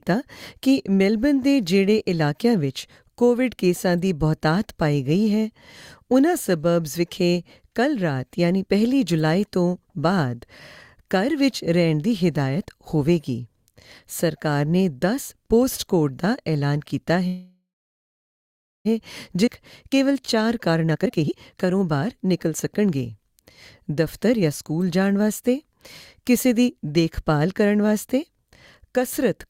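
At 17.27 s the audio freezes: the last bit of sound carries on as a fading buzz, then goes silent for about 1.2 s before picking up at 18.87 s exactly where it stopped. That's a call audio freeze, likely from packets stalling until the jitter buffer ran dry. Nothing is lost, but it adds roughly 1.6 s of delay.

Then at 19.46 to 19.49 s there's a skip ahead. About a second of audio was dropped while later audio was already queued, so playback jumps forward with barely any gap, and the two sides are stitched almost directly together.

From 19.90 to 23.02 s you get a jitter buffer speed-up. The buffer was still holding more than it wanted, so the receiver kept trimming tiny pitch-period slices, around 0.7 s in total. The audio runs about 19% fast at unchanged pitch and feels rushed.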